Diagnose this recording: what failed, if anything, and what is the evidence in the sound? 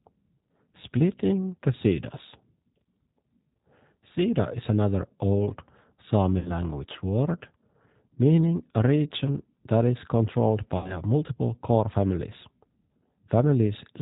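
G.729 codec, throughout: the codec stage. The speech is band-limited with nothing above 4 kHz and has a plainly audible rough, synthetic grain. That fits an 8 kbit/s G.729A path. Each 10 ms frame is rebuilt from a vocal tract filter, a pitch predictor and a handful of pulses rather than the original waveform. The fine detail that doesn't fit that model is simply discarded, which leaves the speech intelligible but coarse.

VoIP packet loss concealed by the speech codec, at 6.39 to 6.52 s and 10.78 to 10.97 s: the network stage, with the decoder covering the gaps. Each event replaces about 60 ms of audio, consistent with two lost packets. At the second event, just after "region that is controlled", the decoder extrapolates from its last pitch and filter, stretching the sound into a buzzy tone or a coloured noise that fades. Because each frame builds on the previous one, the speech stays weak or distorted until roughly 6.52 and 10.97 s.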